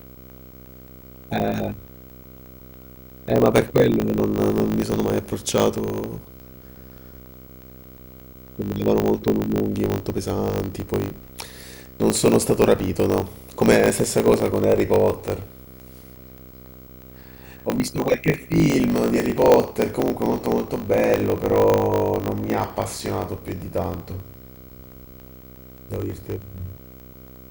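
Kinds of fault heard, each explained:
Video or display buzz: A screen or video cable is leaking into the audio path, laying a buzz at the picture's field rate of 59.94 Hz under the speech, with hash above it and a thin, very high whine at the line rate of 15.7 kHz, all sitting roughly 20 dB below the speech. That 15.7 kHz tone, and the field rate falling just short of 60 Hz, mark it as display interference rather than ordinary mains hum.
Block size mismatch (truncated): One stage hands over longer blocks than the next stage takes in, and the tail of each block is discarded. The result is a 50 Hz buzz from the regular cuts, which fits blocks of 1024 samples being written, and speech that runs 1.07 times fast while keeping about its normal pitch. That speed-up without a pitch change is what separates it from mains hum at the same 50 Hz.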